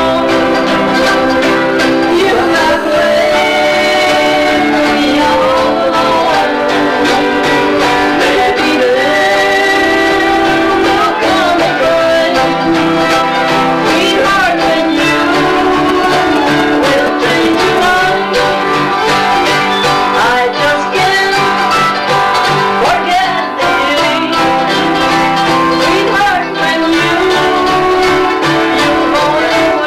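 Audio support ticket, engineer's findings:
GSM phone buzz, 2.11–3.59 s and 17.82–19.10 s: hard, raspy buzz at 217 Hz with many harmonics, about -15 dB then about -19 dB relative to signal. Nearby 2G handset in a call; audio circuitry rectifying its RF bursts. Buzz is independent of the programme.

GSM signalling bursts, 15.89–17.79 s: galloping groups of short 217 Hz buzzes, roughly 10 dB below signal. Nearby 2G handset sending short burst groups ahead of the call. Input stage rectifying the RF. Call buzz starts at 17.82 s, right after.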